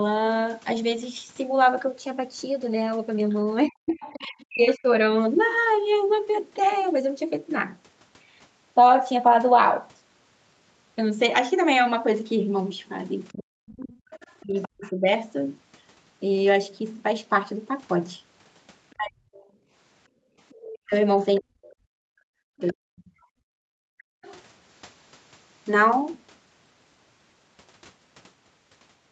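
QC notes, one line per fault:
3.3–4.74 s, 13.29–14.91 s and 20.5–24.39 s: other side's voice leaking through. A second, quieter voice sits under the talker, roughly 20 to 25 dB down. This is likely loudspeaker playback that the echo canceller did not fully remove from the microphone.
3.66–4.87 s, 13.32–15.1 s and 18.94–23.12 s: speech suppressed in double talk. The talker's voice dips and breaks up, at worst by around 40 dB. About a second is lost in each of the first two spans, about two seconds in the third. Both sides likely spoke at once. The canceller likely turned the talker down along with the echo.
19.67–20.38 s and 23.4–24.22 s: background gated by the echo canceller. The room sound drops out briefly, by about 17 dB in the first span and about 40 dB in the second, and then returns. The canceller clamped the microphone hard while the loudspeaker played. It then let go.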